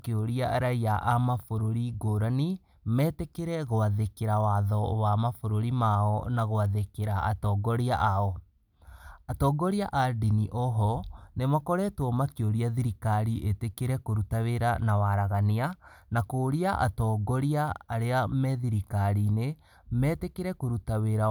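A recording of speech, with no technical fault to be heard anywhere in it. Nothing goes wrong at any point, so there are no times or causes to give.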